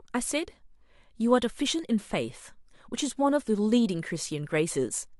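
The speech signal runs without any audible interruption, distortion or level disturbance at any point in the recording.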